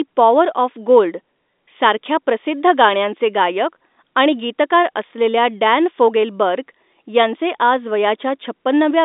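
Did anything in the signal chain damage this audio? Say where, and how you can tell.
No, nothing in the signal chain damaged this audio; it simply carries the narrow telephone band of a G.711 line, with nothing above about 3.8 kHz.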